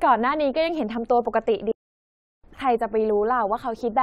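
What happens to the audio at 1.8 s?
At 1.8 s the speech cuts out abruptly and stays silent for about 0.72 s, from 1.71 to 2.44 s, before resuming. This is a playback stall, likely caused by the player running short of data or its thread being blocked, leaving the output empty until it recovered.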